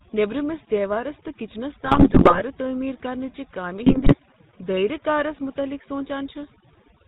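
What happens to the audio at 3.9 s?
From 3.86 to 4.16 s, between "چہ کامہِ" and "دٲیرہ کارس متعلق", GSM bit errors corrupt the decoder's filter, pitch and gain values, so the speech breaks into squawks, pops and gargling.

Underneath that, the GSM full-rate codec at 13 kbps rebuilds the voice from sparse excitation pulses and passes nothing above 4 kHz, leaving a plainly audible buzzy, gravelly roughness.

Overdone noise removal is also at work here, pushing frequency bands near its noise estimate far down and taking quiet parts of the voice with them, over a lowered background that breaks up into twinkling specks.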